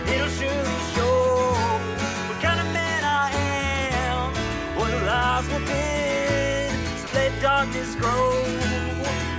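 From 7.07 to 7.13 s, 60 ms of sound gives way to steady comfort noise, likely sound dropped by the voice detector after it mistook that moment for background.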